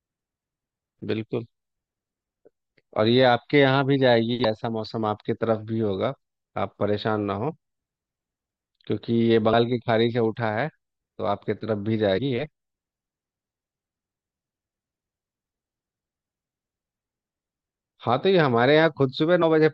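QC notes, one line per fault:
4.41–4.45 s, 9.52 s, 12.17–12.19 s, 19.41 s: compressed frames skipped. The speech jumps ahead by roughly a tenth of a second, then about 150, 100 and 50 ms. Whole frames never play.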